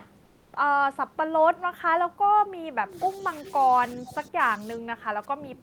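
Comfort noise in place of the background appears from 0.25 to 0.53 s. For about 280 ms the real room background, which sits about 37 dB below the loudest passages, gives way to a flat, featureless hiss about 4 dB quieter. This is likely discontinuous transmission, consistent with Opus DTX, with the receiver synthesising filler noise during the pause.

Speech suppressed in double talk occurs twice. A brief, slight dip at 3.14 to 3.24 s is followed by heavier suppression from 3.70 s to the end, reaching roughly 20 dB down. The likely cause is an echo canceller that could not separate the talker from far-end sound and attenuated both.

An echo leak follows at 4.07 to 4.13 s: a faint scrap of the voice returns 373 ms late, far below the main speech. This likely comes from loudspeaker pickup that the echo canceller failed to fully remove, sending residual echo back into the call.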